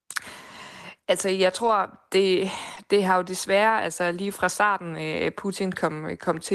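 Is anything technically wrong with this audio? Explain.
Yes, there are a couple of packet-loss problems in this speech clip.

From 1.63 to 1.69 s there's a lost packet rebuilt from error correction. About 40 ms of audio never arrived, which fits two lost 20 ms packets. The following packets carried a low-bitrate backup copy of that stretch, and the decoder played those copies. So there's no gap, just a short patch where the speech turns rougher and a bit noisier.

At 2.75 to 2.78 s there's a short concealed packet loss. About 20 ms went missing, and the receiver filled roughly 11 ms of it by extending the preceding sound, following its pitch if it was voiced or using shaped noise if not, before blending back into real audio. Over 2.76 to 2.78 s, a 20 ms backup copy from error correction covers the rest. Together they give a quick smear or wobble where a tiny bit of speech can drop out.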